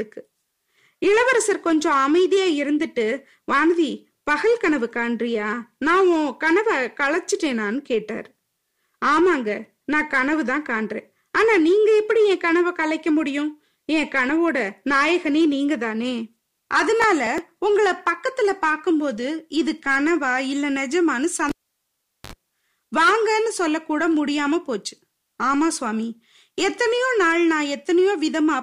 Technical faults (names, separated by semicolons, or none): processor overload crackle; cable pulled and plugged in